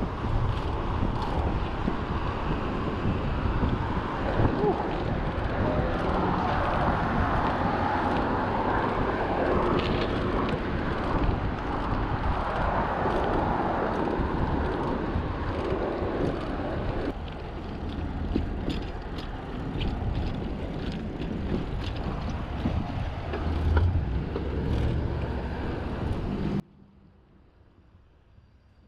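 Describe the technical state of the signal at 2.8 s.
At 2.8 s the signal is intact, with no audible fault at that point.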